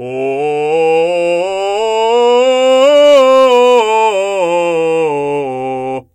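From 2.82 to 3.81 s the music runs into hard clipping: it's pushed about 3 dB past what the stage can pass, so the peaks get sheared flat. Those squared-off tops throw extra high harmonics in, and you hear it as a gritty crackle riding the louder moments.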